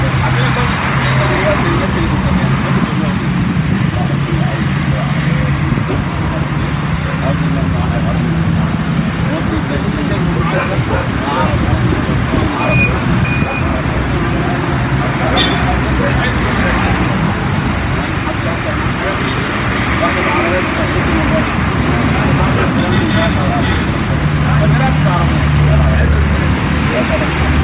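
No audible technical faults are present anywhere in the recording.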